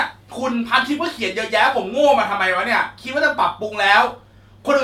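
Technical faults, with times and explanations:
Nothing stood out as a technical fault on listening to this speech recording.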